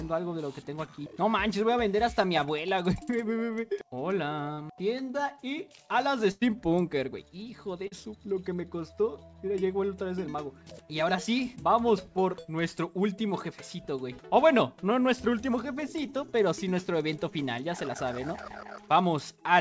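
At 0.86 to 0.89 s, 4.53 to 4.59 s and 7.87 to 7.93 s comes short concealed packet loss. Audio arrived too late, and the receiver extended the previous sound. Each is a brief smear or wobble. At 6.31 to 6.43 s a burst of packet loss drops about 100 ms. The last sound is held and fades, then playback resumes further on. The call codec, which fits G.722, leaves nothing above 8 kHz.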